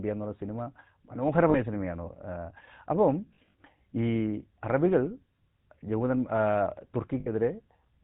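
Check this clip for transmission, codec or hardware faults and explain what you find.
Two faults are present, a low-rate speech codec and repeated frame losses.

The GSM full-rate codec affects the whole clip. Nothing above 4 kHz survives, so the speech sounds narrow and boxy. There is a clear buzzy, gravelly roughness. This codec models the vocal tract and drives it with a sparse, regular pulse train, discarding most excitation detail. The damage is plainly audible. The sound points to roughly a 13 kbps coder.

Lost GSM frames occur three times. At 1.50 s, about 40 ms drops, which fits two frames. From 3.34 to 3.54 s, losses scatter over 200 ms, totalling 100 ms, with the longest run around 40 ms. At 7.20 s, about 60 ms is lost. Each gap is filled by repeating the last good frame's settings. The speech briefly hangs in a rough, metallic ring.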